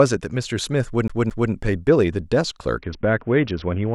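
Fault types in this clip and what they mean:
CD stuck on one turn: A scratch keeps throwing the laser back a track, so the same 220 ms slice of speech plays twice over from 1.08 to 1.52 s. There's a tiny mute at each jump, giving that quick, even skipping-disc stutter.
Bluetooth SBC bit pool drop: From 2.78 s to the end, the encoder is starved of bits, which fits a fall from a bit pool of 31 to about 6, roughly 55 kbps. The top bands thin out, so the treble goes dull and gritty noise creeps in.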